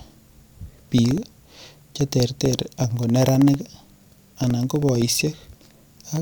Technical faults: periodic USB or driver dropouts

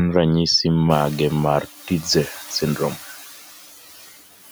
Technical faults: noise suppressor artifacts

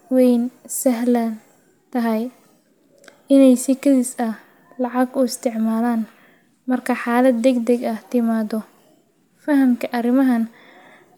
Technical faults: none

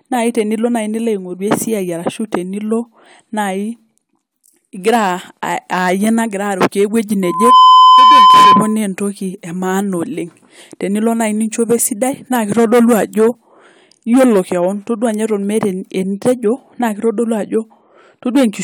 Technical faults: loudspeaker feedback squeal

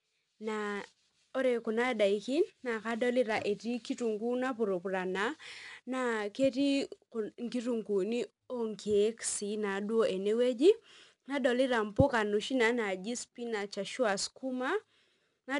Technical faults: 4-bit ADPCM compression

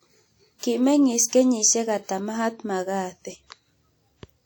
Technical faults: WMA compression; pre-echo

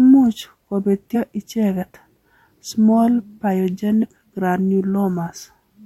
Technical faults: compressed frames skipped

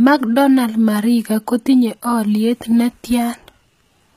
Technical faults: HE-AAC compression

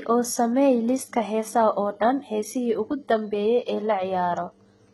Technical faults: HE-AAC compression

